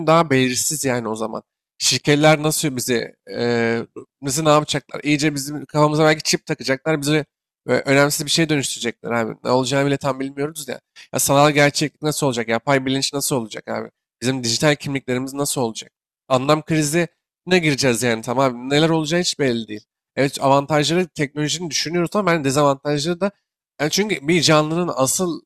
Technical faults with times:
none

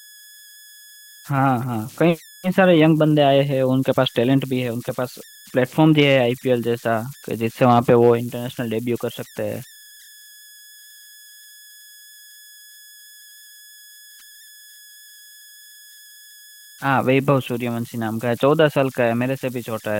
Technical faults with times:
0.00-20.00 converter idle tones

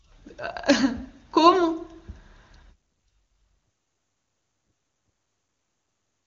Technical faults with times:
none

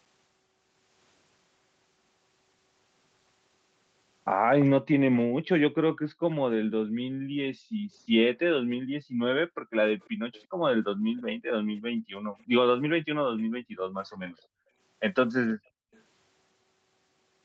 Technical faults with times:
4.60-4.65 echo leak
5.33-10.62 background gated by the echo canceller
10.01-12.44 echo leak
11.96-12.36 background gated by the echo canceller
13.37-14.32 echo leak
13.52-15.92 background gated by the echo canceller
15.50-16.02 echo leak

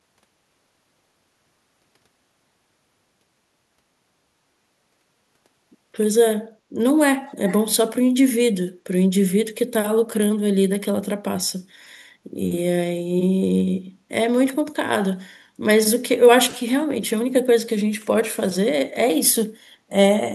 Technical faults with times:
7.28-7.60 echo leak

